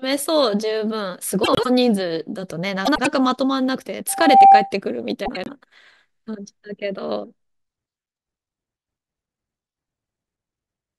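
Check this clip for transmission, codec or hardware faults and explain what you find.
Two kinds of fault are audible in this speech clip: frames out of order, three times, and one loudspeaker feedback squeal.

Frames out of order occur at 1.44 to 1.66 s, 2.85 to 3.07 s and 5.25 to 5.49 s. In each, two adjacent runs of coded frames were decoded in swapped order. Each run lasts about 96 ms, which fits four frames apiece. The stretch plays with its halves exchanged. It sounds like a brief garbled flutter. No time is lost.

The loudspeaker feedback squeal runs from 4.09 to 4.73 s. A microphone was picking up the loudspeaker it fed. At 787 Hz the loop gain passed one, so that tone fed on itself. It swells over roughly a third of a second. It peaks at about 15 dB above the speech. It is heard as a single piercing tone rising out of the sound.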